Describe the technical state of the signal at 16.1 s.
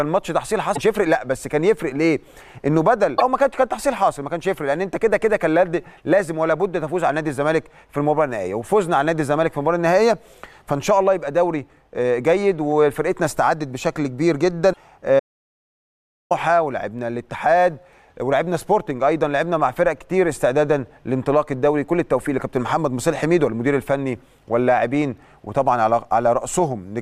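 At 16.1 s the signal is inside an audio dropout to silence running from 15.20 to 16.31 s. The input was likely lost while recording continued, so about 1.11 s of silence replace the sound, with no room tone, before it resumes abruptly.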